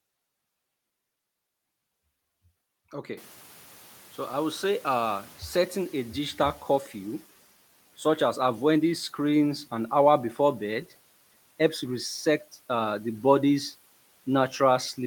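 Noise suppressor catching up, from 3.17 to 6.98 s: the room noise in this speech jumps by about 22 dB at around 3 s, and the suppressor's estimate of the background is still set for the quieter level. The louder noise therefore passes with little reduction at first, then sinks over about 3.8 s as the estimate adapts, ending up roughly 7 dB lower. After that, the room noise sits about 27 dB below the speech.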